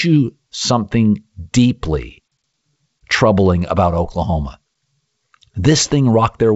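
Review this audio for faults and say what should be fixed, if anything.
No faults were found, so nothing needs fixing.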